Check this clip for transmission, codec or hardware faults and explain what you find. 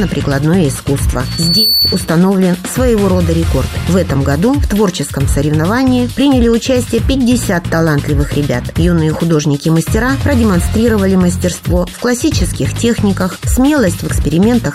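One fault: a loudspeaker feedback squeal from 1.24 to 2.09 s. A microphone re-captured its own loudspeaker output, and at 4.5 kHz the loop gain passed unity, so that tone fed on itself. It swells over a fraction of a second into a piercing whistle roughly as loud as the surrounding audio, then stops when the loop breaks.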